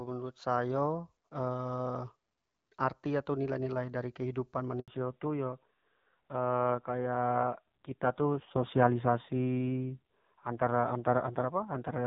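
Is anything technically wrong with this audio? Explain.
Yes, there are two connected faults, both at about 4.8 seconds into this speech clip.

The first is a handover gap from 4.80 to 4.88 s. The call was passed from one network to another, and for those 80 ms no speech frames reached the decoder. The voice fades out within a few tens of milliseconds and then goes silent until the new link picks up. On a waveform this looks like a short flat stretch at the zero line. On a spectrogram it is a narrow vertical band of empty space across all frequencies.

The second is a fallback to narrowband from 4.88 s to the end. Before the switch, the wideband HD Voice coding sounds clear with only light codec coloration, which fits AMR-WB at around 12.65 kbit/s. After the switch, everything above 4 kHz is gone. The voice becomes duller and rougher, which points to a low-rate narrowband AMR mode of around 5.9 kbit/s. 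On a spectrogram the upper energy ends abruptly at the gap, leaving a flat ceiling at 4 kHz for the rest of the clip.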